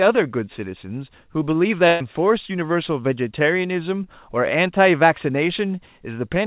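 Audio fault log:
1.88–2.02 s, burst of packet loss: about 120 ms never arrived, so the receiver stretched the last sound and faded it out, then skipped ahead.
4.04–4.08 s, short concealed packet loss: around 20 ms dropped out and was patched by continuing the preceding sound, leaving a quick smear before the real audio blends back.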